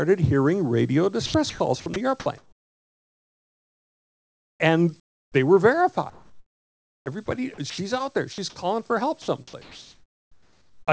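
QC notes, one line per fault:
1.26–4.60 s, sound chopped by the voice detector. The sound breaks up repeatedly, with about 2.5 s swapped for flat hiss. The sender's detector likely toggled transmission on and off.
5.00–5.34 s, comfort noise in place of the background. The real background drops about 19 dB to a smooth, featureless hiss. This is likely synthetic noise filling a pause in transmission.
5.32 s, onset clipped by the voice detector. The sound enters abruptly, missing its first 20 ms. The detector was likely slow to resume sending.
6.10–7.28 s, comfort noise in place of the background. For roughly a second the background turns steady and detail-free. The sender likely stopped transmitting, and the receiver filled the gap.
7.26 s, sound dropped by the voice detector. A sliver of about 10 ms vanishes into noise. The detector likely mistook quiet sound for background.
7.54–7.78 s, sound chopped by the voice detector. 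A brief flicker replaces 120 ms with hiss. Transmission was likely gated off and on again.
8.32–8.38 s, sound dropped by the voice detector. 60 ms of sound disappears under steady noise. The detector likely judged it as background and muted the sender.
9.22–10.91 s, sound chopped by the voice detector. The ending stutters, with about 1.4 s replaced by synthetic noise. Likely repeated detector switching caused the gaps.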